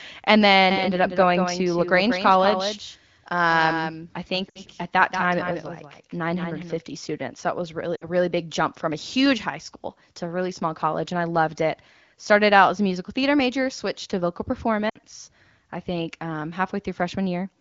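A doubled audio track runs from 0.71 to 6.81 s. A second full-band copy trails the original by about a fifth of a second, roughly 10 dB quieter and with no room decay. It starts and stops abruptly, most likely from a slower second capture path.

Lost AMR speech frames occur at 4.49 to 4.61 s, 7.96 to 8.08 s and 14.89 to 14.97 s. Each gap lasts about 60 ms, which fits three 20 ms frames failing their checks. The decoder stretches the last good sound with falling gain, dropping to near silence within two frames before the sound returns weak for a moment. Around these gaps the wideband coding stays clear, consistent with one of the higher AMR-WB rates.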